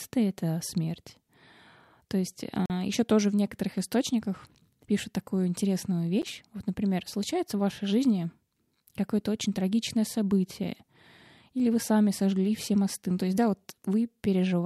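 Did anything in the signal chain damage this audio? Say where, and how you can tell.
Yes, at the driver or buffer stage. Blocks of digital silence cut in hard at 2.66–2.70 s, before "еще тоже в некоторых", and at 6.22 s, after "источниках пишут такую интересную". The first leaves a short hole and the second a tick. Their 43 ms and 11 ms lengths fit missed 2048- and 512-sample buffers.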